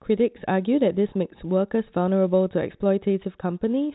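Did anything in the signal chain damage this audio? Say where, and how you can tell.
No, nothing in the chain damaged this speech; the only mark it carries is the G.711 telephone coding working as intended, audible as a hard ceiling at 4 kHz and a faint quantisation hiss about 38 dB down that rises and falls with the level.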